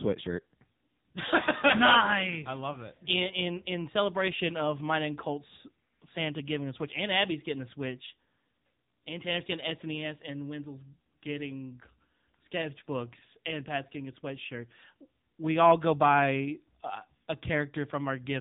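Speech passed through the AMR narrowband mobile codec for its whole length, with nothing above 3.8 kHz and a plainly buzzy, synthetic edge that fits a low rate around 8 kbps. That buzz sets it apart from a simple telephone-band filter.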